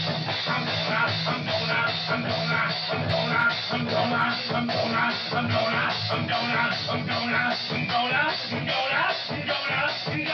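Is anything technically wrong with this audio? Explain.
No, no technical faults heard.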